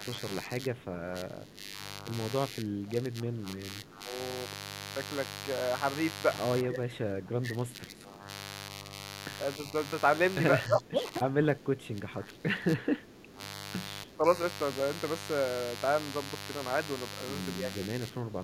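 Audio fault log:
throughout: mains buzz. A steady, raspy buzz sits roughly 10 dB under the speech. Sharp spikes twice per 50 Hz cycle produce it. A spectrogram shows evenly spaced horizontal lines at multiples of 50 Hz reaching several kHz, and the waveform carries a spiky 100 Hz ripple.
0.05–2.05 s, 2.48–4.06 s, 6.63–8.28 s, 10.66–13.4 s, 14.04–14.25 s, 17.71–18.44 s: speech suppressed in double talk. The talker dips, dulls or breaks up, by up to around 15 dB in the longer stretches and around 10 dB in the last two. This is likely an echo canceller ducking both sides. The waveform envelope sags, and high-frequency energy thins on a spectrogram.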